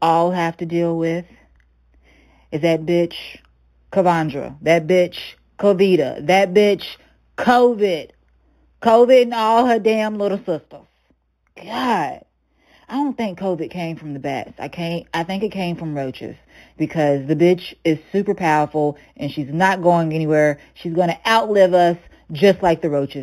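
Throughout the speech there is imaging from linear upsampling: the audio was raised from an 8 kHz rate to 44.1 kHz by joining samples with straight lines, which filters poorly. The band just below 4 kHz sounds dulled, and a faint mirrored copy of the speech spectrum remains between 4 and 8 kHz, roughly 30 dB down, heard as a thin metallic shimmer on sibilants. On a spectrogram that copy appears as a ghostly reflection folded upward about the 4 kHz line.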